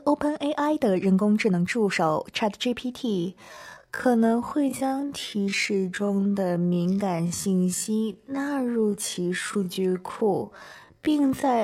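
At 3.04 s a time-stretched section begins and runs to the end. The audio slows to about half speed, pitch unchanged, and drags, likely from stretching software.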